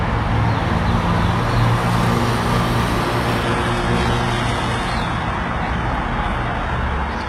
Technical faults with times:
3.43-7.29 adaptive stream at a lower bitrate

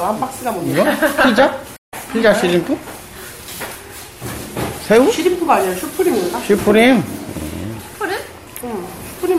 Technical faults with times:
1.76-1.94 stream reconnect

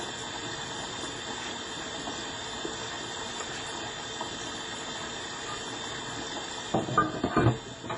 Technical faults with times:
0.00-7.97 WMA compression

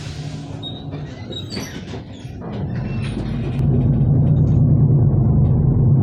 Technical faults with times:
3.59-6.02 de-emphasis applied wrongly

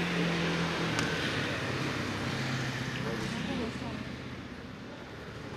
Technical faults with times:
none

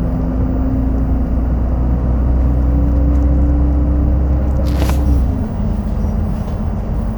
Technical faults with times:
0.00-7.18 timecode bleed

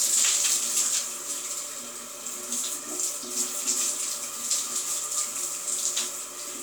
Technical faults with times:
none

